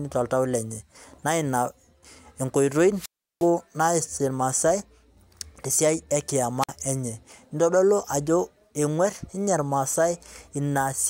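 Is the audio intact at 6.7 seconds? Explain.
No. A wireless microphone squelch dropout runs from 6.60 to 6.69 s. The FM radio signal fades, hiss swells, then the receiver's squelch mutes the output for about 52 ms before the speech returns. That hiss before the hole sets it apart from a clean digital dropout.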